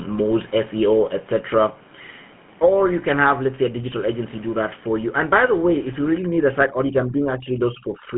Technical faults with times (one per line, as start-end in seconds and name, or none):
0.00-8.17 GSM full-rate codec